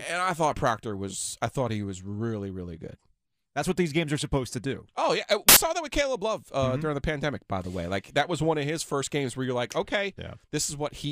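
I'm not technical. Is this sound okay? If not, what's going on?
No. Right after "yeah uh", from about 5.49 to 5.57 s, there's a quick burst of harsh hiss before "saw that with". That's samples built from the wrong bytes: the player stitched each tiny slice of sound together wrongly, so it came out as loud noise.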